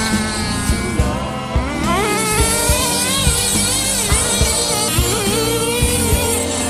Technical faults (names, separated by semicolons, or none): clock slip clicks